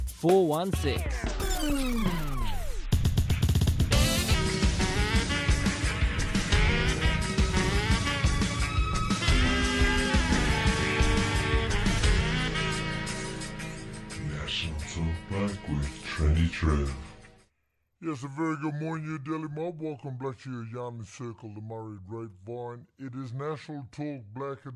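From 4.34 s to the end, the audio suffers a wrong sample rate fault. Material captured at one rate is being played back slower, with no conversion. The slowdown fits 44.1 kHz audio played at 32 kHz. Everything runs at 0.726 times normal speed. Pitch drops by the same ratio, about 5.55 semitones. The sound turns low, heavy and dragging. Its timing stretches out along with the fall in pitch.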